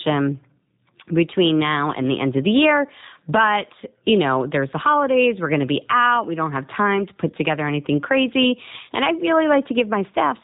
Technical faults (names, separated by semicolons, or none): G.729 codec